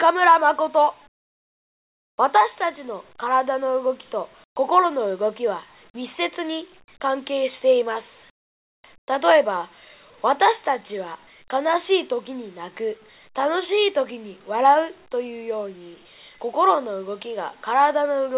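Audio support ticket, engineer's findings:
Comfort noise in place of the background at 1.08–2.18 s, 4.44–4.56 s, 8.30–8.84 s and 8.98–9.08 s. Room tone swaps for flat, featureless hiss, about 28, 19 and 18 dB quieter, the last at the same level. Likely DTX pausing transmission, receiver synthesizing filler. Band tops out at 4 kHz, fits a narrowband call codec.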